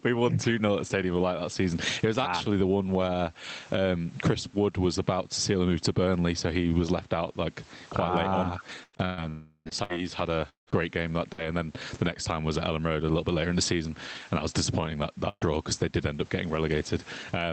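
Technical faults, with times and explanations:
Throughout, gain pumping: the level keeps breathing, a swing of around 15 dB. The likely cause is input gain set far too hot, with a fast limiter or compressor reining it back on each peak. Loud and quiet passages end up crowded together, so the whole thing sounds squashed and restless.
8.83 to 11.45 s, repeated packet loss (robotic sound): over this stretch the audio keeps breaking up. There are five separate holes, about 480 ms lost in total, and the longest is around 174 ms. Each one gets papered over by stretching the last bit of sound, and roughly a fifth of the span is that filler. With the holes arriving so close together, the result is choppy, with chunks missing.
9.29 to 9.68 s, long network dropout: inside that rough patch there's one bigger hole where about 360 ms never arrived, most likely because the network stalled outright. The receiver carries the last sound forward as a fading buzz or hiss, and the final 60 ms or so is plain silence before the audio picks up again further along. 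Whatever fell in that gap is simply gone.
15.29 to 15.44 s, burst of packet loss: about 120 ms in a row didn't make it in time. The receiver continues the previous sound and turns it down as the gap goes on, so you get a short held buzz or fading hiss. The last 50 ms or so drops to silence before things resume, with the middle bit missing.
14.81 to 14.87 s, 15.41 to 15.47 s and 15.95 to 16.01 s, lost packet rebuilt from error correction: three separate 60 ms stretches went missing, but the following packet in each case carried a low-bitrate spare copy via Opus in-band FEC. The decoder played those copies, so there's no gap, just brief moments that sound grainier and noisier. The call runs at an 8 kHz bandwidth, and these frames come through a bit rougher than the audio around them.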